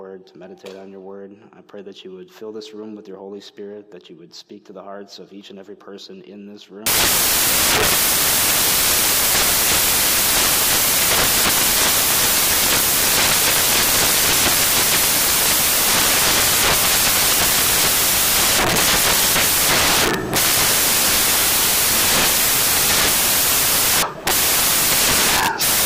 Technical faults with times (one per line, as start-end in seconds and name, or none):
6.86-25.85 samples built from the wrong bytes